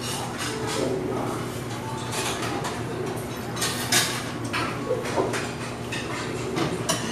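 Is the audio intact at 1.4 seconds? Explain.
Yes, the sound at 1.4 seconds is intact, with no dropout, click, distortion or other fault at that moment.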